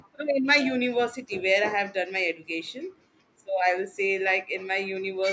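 From 0.13 to 0.17 s there is a brief echo leak: a very faint scrap of the speech returns about 313 ms late. Likely cause is a far-end loudspeaker whose echo canceller let part of its microphone pickup slip back.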